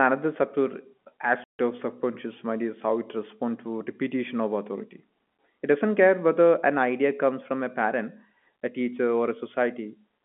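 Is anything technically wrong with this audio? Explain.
Yes. From 1.44 to 1.59 s, just before "of subconscious mind is", the speech drops out completely for 150 ms. This is packet loss filled with silence: the receiver had nothing for that stretch and played silence, and the length fits five consecutive 30 ms packets going missing. The cut is abrupt at both ends. On the waveform it is a flat line with vertical walls; on the spectrogram it is a blank vertical strip through the telephone band, which tops out at 3.4 kHz here from the G.711 line.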